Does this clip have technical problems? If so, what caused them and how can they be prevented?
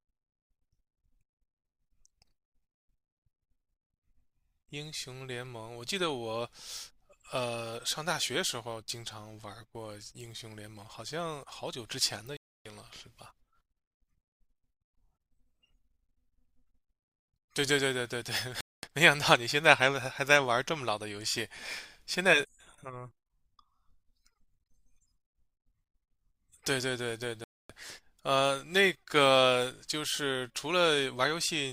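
Yes. Digital broadcast dropouts at 12.37–12.66 s, 18.61–18.84 s and 27.44–27.70 s cut the speech to silence for 0.22 to 0.29 s each. The receiver muted on missing or corrupted frames, so that audio is gone. Stronger reception or better error protection prevents them.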